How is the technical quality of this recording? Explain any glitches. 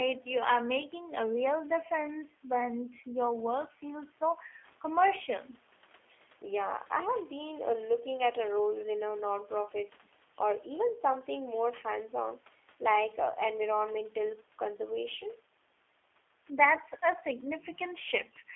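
The quality is limited by low-bitrate telephone coding for the entire 19 seconds of speech.

G.729 codec, throughout: the speech has the rough, slightly synthetic character of a G.729 (G.729A) encode, which fits a rate of about 8 kbit/s. The codec models each short frame as a vocal tract filter plus a pitch predictor, with only a few pulses standing in for the excitation, so fine detail is replaced by an approximation. The band is confined to roughly 300 Hz to 3.5 kHz, giving a thin, muffled tone, and the coding damage is plainly audible. The call microphone's high-pass filtering of the lowest bass is normal.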